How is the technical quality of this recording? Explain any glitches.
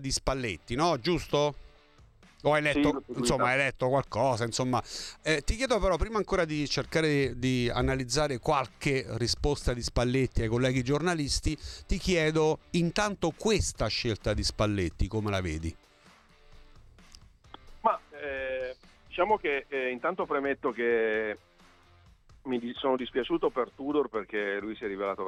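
Nothing stood out as a technical problem on listening; no glitches were heard anywhere in the recording.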